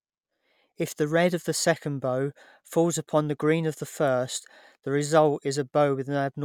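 A recording of speech with no technical faults present in the signal.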